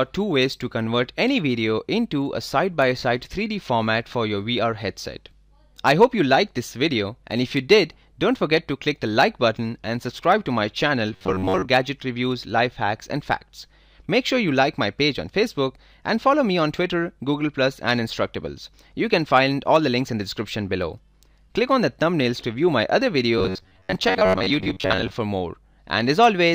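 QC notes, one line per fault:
11.13–11.67 s and 23.38–25.13 s, robotic sound from repeated short buffers: the sound turns into a rigid, metallic buzz pitched near 94 Hz. Most of the first stretch and about half of the second is repeated audio, likely because new samples arrived late and the same roughly 10.7 ms chunk was replayed in place of the skipped material. A spectrogram would show flat, evenly spaced harmonic lines at multiples of 94 Hz, and the waveform would show identical short cycles repeating back to back.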